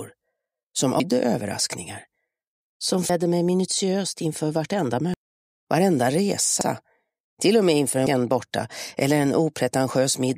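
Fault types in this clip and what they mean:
Damaged data in a compressed stream: Corrupted bytes make the decoder lose sync and skip ahead. Short chirps or blips occur at 1.0, 3.09, 5.14 and 8.07 s.
Overlapping chunks: Each 4-second chunk starts before the previous one ends. At 6.61 s, about 50 ms plays twice, heard as a brief stutter.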